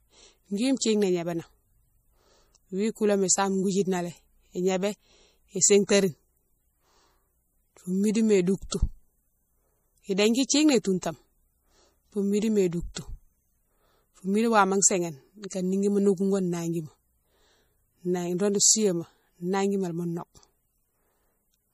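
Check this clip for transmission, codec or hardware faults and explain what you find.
Two problems stand out here: plainly audible lossy-codec damage across the whole clip, and one short pre-echo.

The MP3 compression runs from start to finish and is plainly audible. Nothing comes through above 15.3 kHz, which is the encoder cutting off the treble at a fixed frequency. Weak frequency lines also flicker on and off from frame to frame, so the speech has a watery, swirly quality and the s sounds chirp metallically. That damage fits a low bitrate of around 40 kbps, and MP3 is the likely culprit.

The pre-echo sits at 8.70 to 8.72 s, spreading over about 27 ms just ahead of a sharp attack. A transform codec spreads its quantisation noise evenly over a whole block. Because that attack lands late in its block, noise scaled for the loud part leaks into the quiet stretch before it. You hear a brief hiss leading in, and the attack itself comes out soft and smeared.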